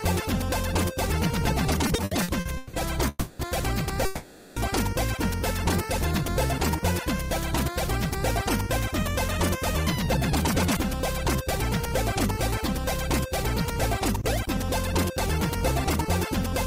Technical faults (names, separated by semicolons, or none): repeated stalls (stutter); call audio freeze; jitter buffer speed-up